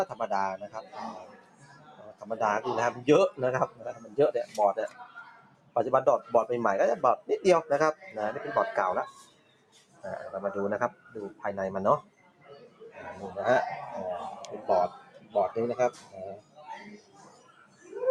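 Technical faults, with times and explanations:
Throughout: noise suppressor applied to music or sounds. A suppressor tuned for speech stays active on this material and treats steady tones, ambience and reverberant tails as noise to be removed. Its gain swings by roughly 15 dB as it decides moment to moment what to keep. Sharp onsets pass through largely intact while sustained parts are pulled down behind them, so the level pumps and flutters and the sound loses body between attacks.
0.63–2.24 s, 3.68–4.55 s, 4.89–5.76 s, 9.19–10.04 s, 10.92–11.43 s, 12.02–12.82 s, 14.98–15.35 s, 15.92–17.86 s: sound cut by the noise suppressor. In each stretch the suppressor judges the held or decaying part of the sound to be noise and turns it down harder than the rest. The deepest drops reach about 13 dB in the first span and about 9 to 12 dB in the others. Tails shorten and sustains sink while transients still come through.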